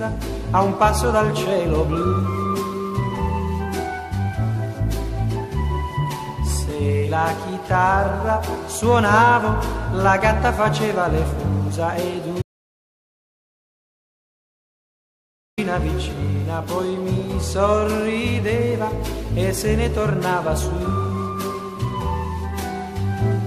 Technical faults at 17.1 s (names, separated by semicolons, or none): none